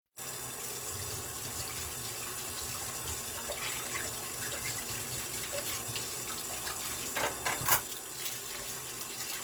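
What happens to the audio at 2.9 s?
At 2.9 s, as throughout, the sound is grainy and rough, likely from Opus compression in its music mode at a low bitrate around 24 kbps. Bands starved of bits are filled with folded or noisy content, so a spectrogram shows smeared, speckled texture instead of clean partials, with content still reaching about 20.1 kHz.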